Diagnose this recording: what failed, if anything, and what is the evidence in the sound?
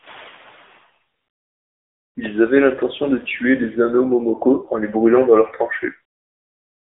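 The failure is at the codec stage: the speech went through the AMR narrowband mobile codec. Throughout, the line band runs only from about 250 Hz to 3.6 kHz, with nothing above 3.7 kHz, which fits 8 kHz sampling. The coder models the vocal tract and excites it with a few pulses per 5 ms subframe. The clearly audible buzzy, synthetic edge on the speech points to a lower-rate mode near 8 kbps.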